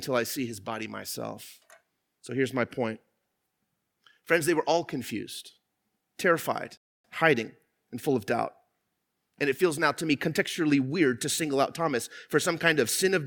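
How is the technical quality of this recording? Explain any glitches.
The recording has one glitch, a rebuffering stall. From 6.77 to 7.05 s the speech halts into silence for about 0.27 s, then carries on with "hiding and full of". The player had run out of downloaded audio and waited for more. Unlike a dropout, the speech resumes exactly where it stopped, so nothing is lost and only time is added.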